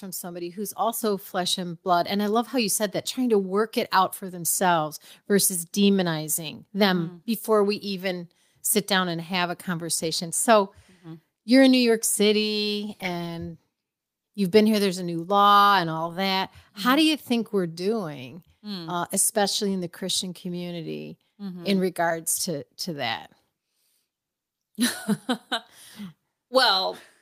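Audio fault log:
1.02 s, microphone volume stepped up: the call software raised the input gain in one step, about 6 dB, so voice and background jump louder together between "somebody who's" and "flesh and blood".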